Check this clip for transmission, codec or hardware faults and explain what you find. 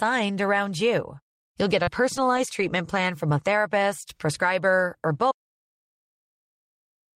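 Three faults are audible in the speech: a concealed packet loss, three packets rebuilt from error correction, and a dropout to silence that runs to the end.

From 1.83 to 1.89 s there is a brief smear where about 40 ms never arrived; this short concealed packet loss was filled by extending the preceding sound.

At 1.87, 2.16 and 2.37 s, 20 ms stretches turn rougher and noisier. Each is a lost packet rebuilt from error correction, decoded from a low-bitrate copy.

At 5.32 s the audio cuts to total silence with no room tone until the end, an audio dropout to silence likely caused by lost input while recording continued.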